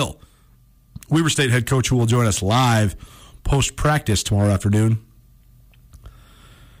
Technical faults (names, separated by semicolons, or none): hard clipping